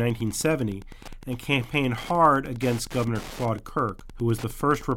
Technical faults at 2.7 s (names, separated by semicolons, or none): Wi-Fi interference